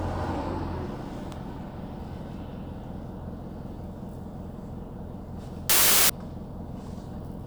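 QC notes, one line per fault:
5.70–6.10 s, wrong sample width: 32-bit integer data read as packed 24-bit, so many three-byte reads straddle sample boundaries. Loud noise buries the sound, which plays at 0.75 speed and lower pitch. Unlike a byte-order swap, it also changes speed.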